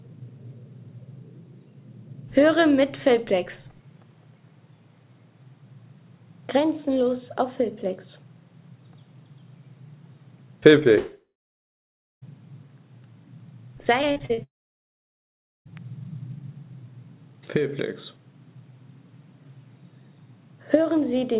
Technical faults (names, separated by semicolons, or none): long network dropout; repeated packet loss (robotic sound)